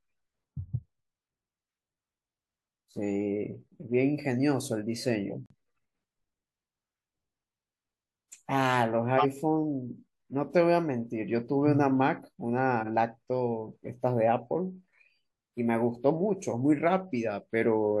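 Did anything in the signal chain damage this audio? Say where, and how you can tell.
Yes. The codec stage damaged this speech in two distinct ways, both traceable to corrupted compressed frames rather than to analogue or converter faults.

Corrupt frame muted: at 5.30 s the audio drops abruptly to true silence and stays there until 5.54 s. The cut is abrupt, and the speech resumes on schedule afterwards. A gap of about 0.25 s fits roughly five codec frames of around 50 ms each being rejected by the decoder and replaced with silence. Because no time is lost and the hole has no fade or concealment smear, it reads as frame muting rather than a network stall or buffer underrun.

Corrupt frame decoded: at 9.18 to 9.26 s a short burst of misplaced energy, peaking at about -10 dBFS, cuts across the speech. A smaller one at 12.80 to 12.87 s reaches only about -20 dBFS. Each lasts about the length of a few frames or a single frame, which points to damaged frames decoded anyway, with wrong gains or spectral codes. 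A wiring click or sample glitch would be a near-instant transient, but these have energy spread across whole frame durations.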